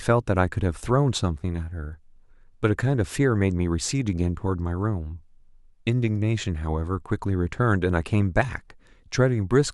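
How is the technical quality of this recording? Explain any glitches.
Nothing in the recording stood out as a glitch or technical problem on listening.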